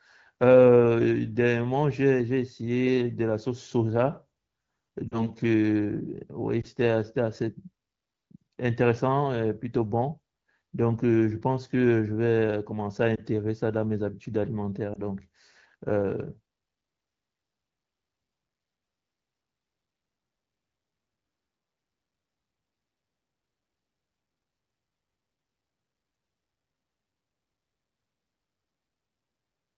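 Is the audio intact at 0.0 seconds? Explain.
Yes, the audio is intact at 0.0 s, with no fault at that moment.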